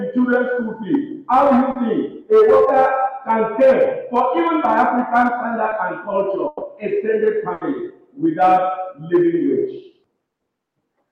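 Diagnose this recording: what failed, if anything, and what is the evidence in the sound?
The network path lost data, and the receiver concealed it. Short concealed packet loss is heard at 1.71 to 1.77 s and 5.69 to 5.73 s, where about 40 ms and 20 ms were synthesised. Each is a brief smear or wobble blended back into real audio. Unlike a dropout, nothing goes silent.

A burst of packet loss, also a network fault, occurs at 6.47 to 6.63 s and 7.53 to 7.63 s. There, 140 ms and 80 ms are filled by a held buzz or hiss that fades, and the sound then resumes further on with that stretch missing. The longer, decaying fill is what separates it from the short concealments.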